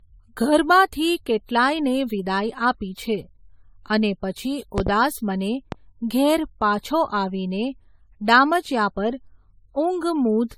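Throughout the speech, generation loss gives a swirly, hollow sound with blurred attacks and nothing above 19.1 kHz, likely from many repeated AAC-LC encodings at around 96 kbit/s. Loud pops follow: a double pop from 4.78 to 4.90 s, right after "અને પછી", peaks well above the speech, and a single pop from 5.72 to 5.76 s, just before "ઘેર પાછો આવીને", peaks about 10 dB above it. Both are likely sudden voltage spikes added to the signal.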